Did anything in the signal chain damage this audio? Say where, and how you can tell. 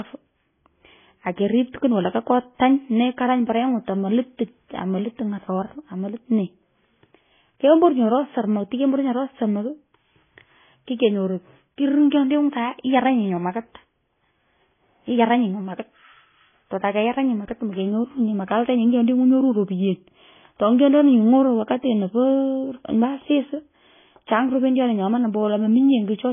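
Yes, at the codec stage, and it runs the whole way through. There's nothing above 3.5 kHz, and the speech carries two layers of coding damage at once: a smeared, warbly texture typical of a very low-rate MP3, with a second codec's own swirl laid on top. That likely points to transcoding between lossy codecs, something like a 16 kbit/s MP3 re-encoded to AAC-LC at about 24 kbit/s. The AAC pass spends its bits on the MP3 artefacts and can't restore the band the MP3 already discarded.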